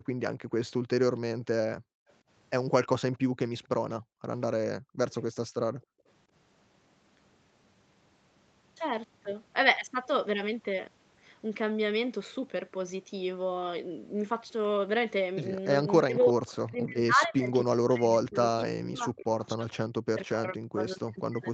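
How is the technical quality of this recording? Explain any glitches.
The recording has echo-canceller trouble: repeated gating of the background, faint echo leaks, and suppression of the talker during double talk. Audio content stops at about 8 kHz, which is consistent with the call codec's bandwidth.

Background gated by the echo canceller occurs at 0.0–0.07 s, 1.78–2.08 s, 4.01–4.22 s and 5.75–6.06 s. While far-end audio played, the canceller clamped the microphone down by about 33–34 dB. The room tone drops out briefly and then returns once the canceller releases.

Echo leak is heard at 2.08–2.13 s and 3.12–3.69 s as a faint copy of the audio delayed by 269 ms. It sits about 40 dB and then about 30 dB below the main speech. The likely cause is a loudspeaker-side canceller that failed to remove everything its microphone picked up and sent the residue back.

Speech suppressed in double talk occurs at 4.81–5.37 s, with roughly 200 ms affected, and again from 15.98 s to the end. 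The talker's voice dips by up to about 40 dB and 35 dB respectively. This likely happened because both sides spoke at once and the canceller attenuated the talker along with the echo.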